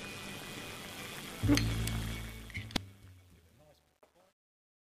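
Overlap-add ripple runs through the whole clip. The audio was split into windowed frames and rejoined with an overlap whose windows do not add up to a steady gain. The level therefore swells and dips by about 6 dB once per frame, at around 150 times a second. That periodic pumping gives the sound a metallic buzz with extra tones around each note, sitting on everything from start to finish.

Truncation distortion on a fade begins at 2.04 s and lasts to the end. The fade-out starting near 2 s is itself smooth in shape, but the gain stage applying it discards low-order bits without dither. The coarseness points to something like 11-bit resolution. As the level drops, the waveform collapses into a few square steps, and from 2.63 s onward the tail turns gritty.

Damaged data in a compressed stream hits from 2.39 s to 2.77 s, inside the fading section. Corrupt or missing bytes in the encoded stream leave the decoder unable to read those frames properly. 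It loses sync and hunts for the next valid frame header. The result is garbled sound over that stretch.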